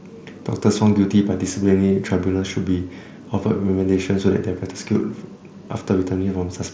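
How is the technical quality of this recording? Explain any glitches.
No glitches are audible in this speech recording, which comes through an mSBC Bluetooth headset link with its band limited to 8 kHz.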